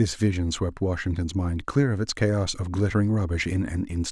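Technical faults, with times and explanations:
No technical faults can be heard in this speech clip.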